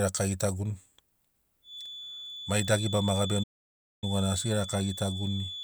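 From 1.61 s a feedback whistle creeps in, a thin, steady 3.5 kHz tone sitting somewhere around 10 dB under the speech, likely from a speaker-to-mic loop hovering right at the edge of feedback. Then at 3.43 s there's a playback stall: everything drops out for about 0.59 s until 4.04 s, likely the player running dry or getting blocked, before carrying on.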